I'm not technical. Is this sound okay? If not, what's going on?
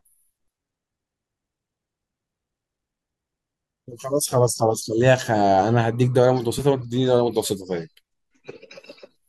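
Yes, this sound is okay, with nothing going wrong in it that needs explaining.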